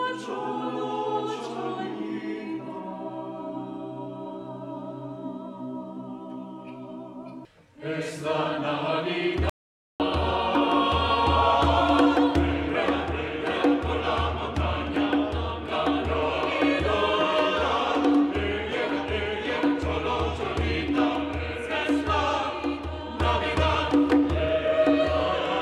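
At 9.50 s the audio drops out to silence for about half a second, returning at 10.00 s. The gap is silent with no room tone, and whatever sounded during it is lost. This audio dropout to silence likely comes from the input signal briefly disappearing while recording continued.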